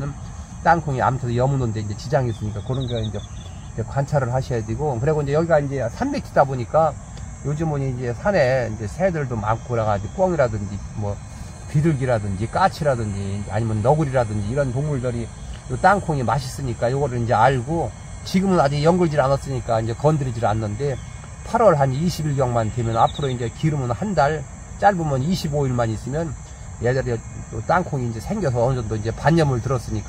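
No technical faults can be heard anywhere in the recording.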